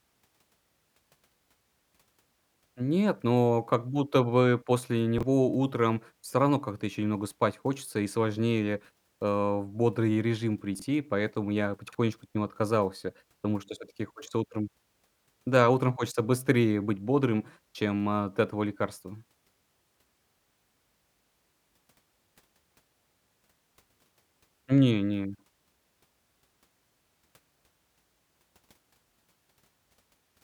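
Chunks out of order at 5.18, 10.75 and 11.88 s in this speech clip give three brief jumbled moments. Audio arrives in blocks of about 21.3 ms. At 5.18 s one block plays a block late, and at the other two times a block plays two blocks late. Nothing is missing, but the scrambled order leaves hard joins at each swap.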